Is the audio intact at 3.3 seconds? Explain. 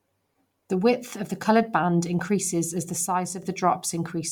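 No. Just after "band increases as the", from 3.06 to 3.43 s, the speech and the background noise drop together by about 6 dB, then come back up, each step abrupt rather than faded. This is a sudden gain jump: the digital gain likely switched from one sample to the next with no ramp, so the whole signal changes level at once. Because the noise floor moves with the speech, it doesn't sound like the talker getting quieter.

The speech at 3.3 s also has a plainly audible breathy, grainy edge, and nothing is present above 20.2 kHz. This points to Bluetooth LC3 compression, at a rate that fits about 48 kbps with 10 ms frames. The codec likely discards much of the fine upper-spectrum detail and fills those regions with shaped noise, which makes the treble sound hazy and granular rather than clean.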